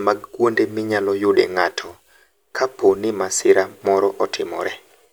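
A few samples are likely being dropped from the stream at 1.86, 3.41 and 4.36 s, under a millisecond each, so the waveform jumps and the speech carries a single sharp click at each.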